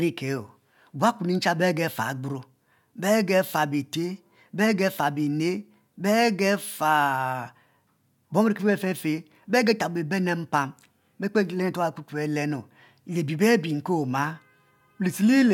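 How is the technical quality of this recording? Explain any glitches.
Technically sound, with no audible glitches anywhere in the speech.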